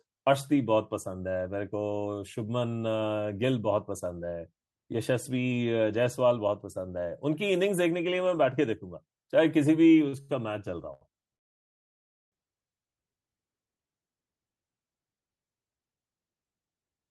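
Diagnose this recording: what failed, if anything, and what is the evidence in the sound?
The trouble sits in the network stage and the receiver's jitter buffer. Three short stalls from late packets are heard at 10.08 s (44 ms), 10.21 s (80 ms) and 10.94 s (74 ms). At each one, a packet arrived after it was due, the buffer ran dry, and the receiver held the last speech sound until the packet turned up. Nothing is lost, but the delay grows by each stall. On a spectrogram the harmonics freeze into flat horizontal bands. The waveform shows a short, repeated, slightly buzzy stretch.

A call audio freeze follows from 11.36 s to 12.33 s, close to one second during which the speech stops. The likely cause is packets held up in transit long enough to empty the jitter buffer. The receiver briefly carries the last sound forward, and it then drops to silence for about 950 ms. When the packets arrive, the speech resumes where it stopped, so the pause is inserted rather than content removed. 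The waveform shows a flat line there, and the spectrogram an empty vertical gap.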